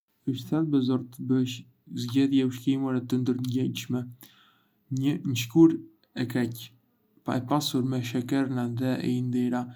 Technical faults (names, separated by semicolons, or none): none